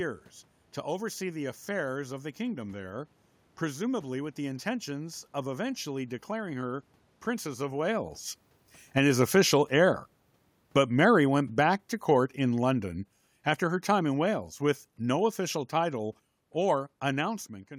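At 10.71 s the automatic gain starts falling. It keeps sinking until 12.99 s, dropping by about 4 dB. The control has judged the input too loud, or its background noise too strong, and is pulling its gain down slowly. The speech fades, and the room noise fades with it. A second fall runs from 13.51 to 17.37 s, again by about 4 dB. The level and background sink together once more. Near 17 s a talker movement also shifts the voice level.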